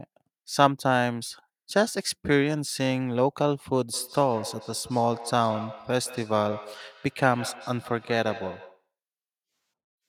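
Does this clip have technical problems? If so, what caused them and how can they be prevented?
Yes. From 3.94 to 8.89 s there is feedback echo between two devices: a second device replays this microphone's signal, which is picked up again beyond the local echo canceller's reach, so the speech returns roughly every 150 ms, up to about 16 dB below it. Muting one device or using headphones prevents it.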